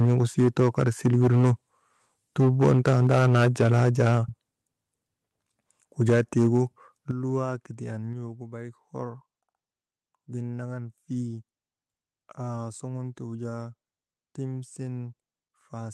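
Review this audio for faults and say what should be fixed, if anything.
Microphone overload runs from 0.0 to 1.52 s, from 2.39 to 4.18 s and from 6.01 to 6.6 s. The loudest peaks land about 7, 9 and 7 dB beyond full scale, and their tops are sheared flat, giving a harsh, crackling edge. Roughly a tenth of the samples are flattened in the first stretch and more in the second. The likely cause is an input level set too high at the converter. Setting the microphone's input gain lower before the call starts would prevent it.

Microphone volume stepped down occurs at 0.05, 3.07, 6.1 and 7.11 s. Each one is a sudden drop in the whole signal, background included: about 2 dB at each of the first three and about 8 dB at the last. The first three fall inside overloaded stretches, and the last comes shortly after the third. This pattern likely comes from the call software detecting clipping and pulling the device's input volume down in one step. 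A correctly set, fixed input level would prevent these jumps, because the software would have no clipping to react to.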